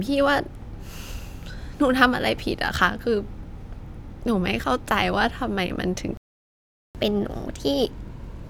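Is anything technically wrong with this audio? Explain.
Yes, there are two related faults in this speech clip.

At 6.17 s the speech cuts out into silence for about 0.78 s, resuming at 6.95 s. This is a playback stall: the player likely ran short of buffered data or had its output thread blocked, so nothing reached the output until it recovered.

From 6.95 s to the end, the speech runs fast and sounds raised in pitch by about two semitones. This is catch-up at higher speed: the player resamples its backlog at 1.15 times normal rate to recover the time lost in the stall, shifting speed and pitch together.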